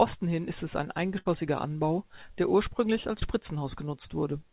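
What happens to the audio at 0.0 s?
Nothing goes wrong at 0.0 s: the speech starts cleanly there, carried over a call path whose narrowband coding leaves nothing above 4 kHz.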